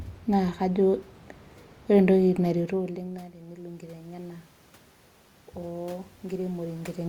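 At about 2.4 s the talker moves away and the level drops by about 21 dB; automatic gain rising then lifts voice and room noise together by about 8 dB until 4.53 s, and again by about 4 dB from 5.6 to 7.04 s, showing as a slow waveform ramp with swelling background.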